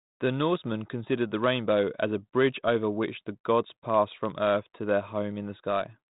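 No technical faults occur anywhere in this speech recording.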